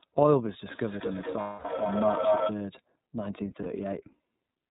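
The iLBC codec is present throughout the speech. Each frame's excitation is coded independently, and the sound fits the 13.33 kbps mode with 30 ms frames. Nothing above 4 kHz survives, and the voice has a plainly audible rough, synthetic edge.

A feedback howl runs from 0.7 to 2.65 s. A microphone and loudspeaker on the same call are feeding each other, and each trip around the loop adds gain. The result is a tone near 700 Hz that peaks about 3 dB above the speech.

Lost iLBC frames occur from 1.4 to 1.66 s, a 240 ms gap inside the howl, and again from 3.62 to 3.66 s. In both cases the decoder repeats the last pitch cycle mixed with noise, which produces a held, buzzy vowel. The speech recovers almost immediately once each gap ends.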